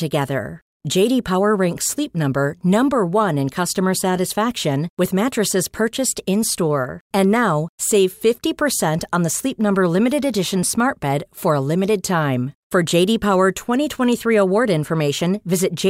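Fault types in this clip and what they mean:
Dropped buffer (overrun): near the very end of the speech, at 14.9 s, the sound jumps forward with no gap at all. Roughly 5 ms of audio has gone missing, and the audio on either side of it is butted straight together. That's likely an overrun, where the software didn't pull its samples off the hardware in time, so they got overwritten. Because the loss is so short, it doesn't take a chunk of a word.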